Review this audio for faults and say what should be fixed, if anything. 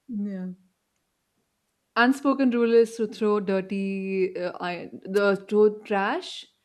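A wireless microphone noise hit occurs from 5.15 to 5.19 s, just after "throw dirty uh iron", as a brief swish of static lasting about 40 ms. The microphone's FM radio link dipped into a fade where reflected copies of the signal cancelled the direct one, so the receiver's own noise rose for that instant. To prevent it, use diversity receivers and keep clear line of sight between transmitter and receiver antennas.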